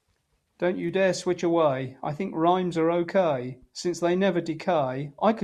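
Nothing goes wrong anywhere in this short bit of speech, so there's no fault to point to at any moment.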